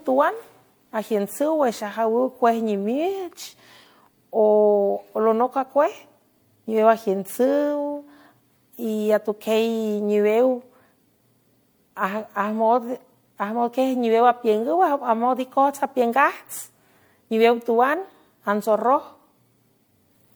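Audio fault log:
throughout, generation loss: The speech sounds swirly and hollow, with a smeared, watery quality and consonant attacks that blur instead of landing cleanly, more degraded than a single MP3 encode at this quality would sound. High-frequency content still reaches about 20.1 kHz. The likely cause is repeated MP3 decoding and re-encoding at 96 kbit/s, around five passes. Each pass requantises on a shifted frame grid, so noise and spectral holes accumulate.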